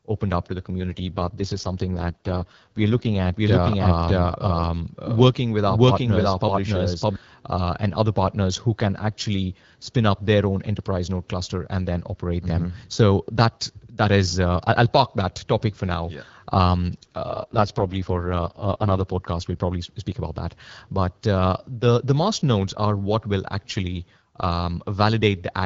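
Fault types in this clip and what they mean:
AMR rate drop: The link seems to have weakened, so the codec stepped down from 12.65 to 6.6 kbit/s to spend bits on error protection. Speech turns rough and synthetic from 0.80 to 3.16 s, right after "opened up to the", and again from 17.29 to 19.04 s, with no gap or band loss.
Doubled audio track: A dry, full-band second copy of the speech trails the original by roughly 0.7 s at about the same level, likely from a slower capture path mixed back in. It cuts in and out abruptly, running from 3.36 to 7.16 s, just before "uh and other partners".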